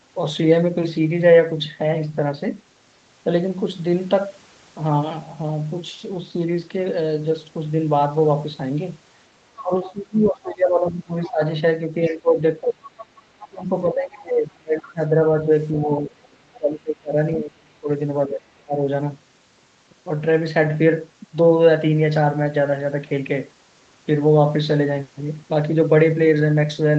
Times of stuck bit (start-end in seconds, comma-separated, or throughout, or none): none